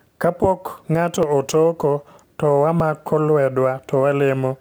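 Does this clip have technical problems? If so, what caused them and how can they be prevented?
Yes. At 1.23 s, just before "otoko to", and again at 2.8 s, right after "ng'ato otoko to", the recording software likely failed to read its input buffer before the hardware overwrote it, a dropped buffer (overrun). Roughly 10 ms of speech vanished each time, and the audio on either side was butted together without any gap, so each spot is heard as a small jump in the speech. Running the capture thread at higher priority with a larger input buffer would prevent this.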